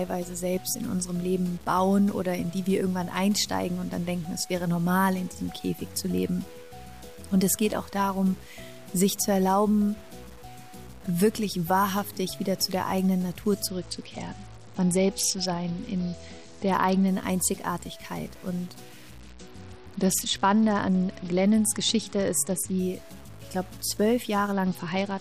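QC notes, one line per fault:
Throughout: low bit depth without dither. A grainy, gritty distortion rides on the sound and changes with it, roughly 25 dB below the signal, with the quietest passages breaking up. This is likely truncation to about 7 bits with no dither, so the rounding error tracks the signal instead of becoming steady hiss.
13.67–17.08 s, 19.21–22.79 s, 24.52 s to the end: Bluetooth SBC bit pool drop. In each span the treble goes dull and a coarse, gritty noise rises; after the first two it clears once the rate recovers, while the last runs to the end. A bit pool cut from 31 to 9, around 72 kbps, starves the upper sub-bands and quantises the rest roughly.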